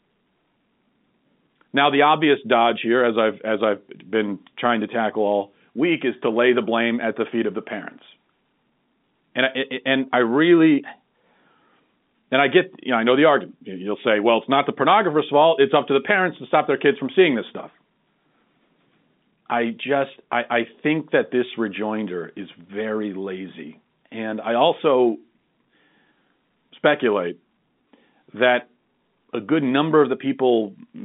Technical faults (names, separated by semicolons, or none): none